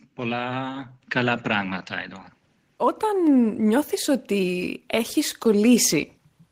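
At 1.02 s, just before "καλά πράγματα εδώ", the microphone volume is stepped up: the call software judges the input too quiet and raises the device's input gain in a single jump of about 7 dB, so speech and background noise become louder together, abruptly.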